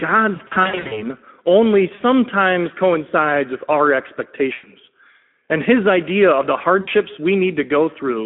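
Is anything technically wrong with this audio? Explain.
Yes. The whole clip carries Speex codec damage, and packet loss concealed by the speech codec breaks it up at four points.

Speex codec, throughout: the audio sits in a narrow telephone band of about 200 Hz to 3.4 kHz. The coarse sound fits a bitrate around 11 kbps. Too few bits reach the CELP excitation, so speech comes out plainly hoarse and noisy.

VoIP packet loss concealed by the speech codec, at 0.35–1.06 s, 1.95–2.02 s, 4.53–4.66 s, and 6.81–6.90 s just after "his idea of the": when packets drop, the decoder repeats its last pitch and filter with falling gain. Speech smears into a fading buzz or coloured noise. The first stretch loses about 300 ms scattered over 560 ms, in gaps up to 60 ms long. The others lose 40 ms, 100 ms and 60 ms.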